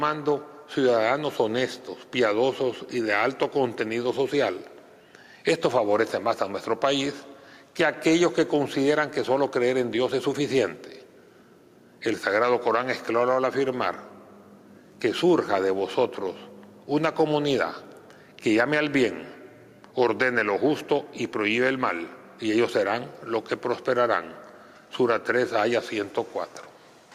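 No technical faults are audible anywhere in the audio.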